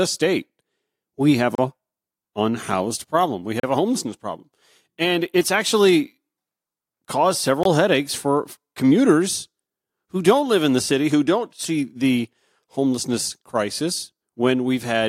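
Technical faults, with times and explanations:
1.55, 3.60 and 7.63 s, gap between stream segments: short hard-edged silences of about 32, 35 and 21 ms cut into the speech. Adjacent 2-second segments have timestamps that leave a small hole, and the player fills it with digital silence. Nothing is lost, only delayed slightly.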